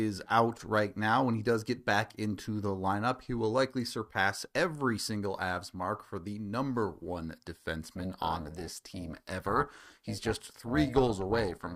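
From 7.96 s to the end, the audio carries an overlap-add ripple. It was split into windowed frames and rejoined with overlaps that do not sum to a steady gain, so the level dips and recovers by about 11 dB once per frame, around 400 times a second. At that rate it sounds like a metallic buzz with extra tones around each note. Unlike added hum, it only modulates sound already present. Unlike compressor pumping, it ignores the signal's dynamics.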